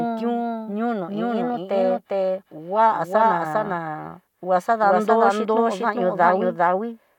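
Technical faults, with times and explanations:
Throughout, doubled audio track. The speech is heard twice, with a second full-band copy trailing the first by roughly 0.4 s. The copy is about as loud as the original. It carries no decay or added room colour, which sets it apart from a natural echo. The likely cause is the same signal being captured again through a slower path, or an edit that left two copies out of step.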